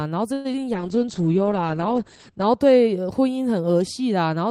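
At 0.33 s the sound stalls for about 0.11 s: the last sound carries on as a fading buzz rather than dropping to silence, then the audio resumes where it left off. This call audio freeze is likely caused by delayed packets draining the jitter buffer. Nothing is lost, but a 113 ms gap is added.

Between 0.53 and 0.56 s there is a brief smear. This short concealed packet loss removed about 40 ms of audio that never reached the decoder in time. The receiver patched only 8 ms by extending the preceding sound before blending back, so the passage ends up roughly 30 ms shorter.

From 0.64 to 1.0 s the audio drags at about 91% speed with unchanged pitch, and sounds are stretched. In this jitter buffer slow-down, the receiver repeated pitch periods and pause fragments, adding 40 ms to rebuild its reserve of buffered audio.

From 0.74 to 2.66 s the sound turns rough, watery and muffled. This call bitrate drop took the encoder from 32 kbps down to 9 kbps, where it stayed for 1.68 s. 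The audio bandwidth narrowed from 20 kHz to 8 kHz, removing the upper frequencies until the bitrate recovered.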